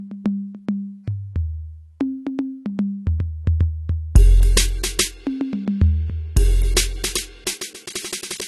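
Throughout the music, nothing sits above 12.1 kHz, so the top end sounds dull; a spectrogram shows a hard shelf there with empty space above. This is likely low-bitrate audio saved at a high bitrate, fitting a 32 kbit/s AAC source re-encoded as 256 kbit/s MP3.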